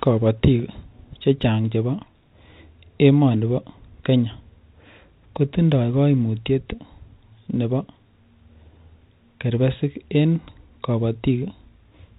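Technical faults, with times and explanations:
No technical faults can be heard in the speech, which carries the normal narrow-band character of G.711 mu-law telephone coding at 64 kbps.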